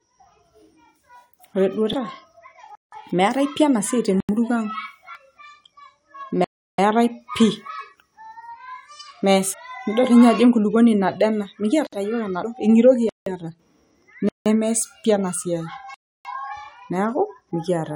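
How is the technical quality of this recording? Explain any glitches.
Technical quality is poor: the speech is interrupted by two recurring faults.

Damaged data in a compressed stream occurs at 1.93, 5.15, 9.52 to 9.54 and 12.42 s. The decoder hits corrupted frames, loses sync and skips ahead to the next valid header, so each spot is a brief chirp or blip of 20 ms or less.

Blocks of digital silence occur at 2.75 to 2.92 s (just before "meetai pi enasiai"), 4.20 to 4.29 s (just after it), 6.44 to 6.78, 11.87 to 11.93, 13.09 to 13.26, 14.29 to 14.46 and 15.94 to 16.25 s. They last between about 58 and 341 ms. The output buffer was likely not filled in time, so the sound cuts to silence with no fade. This leaves short holes. The 171 ms and 85 ms gaps fit 8192- and 4096-sample buffers.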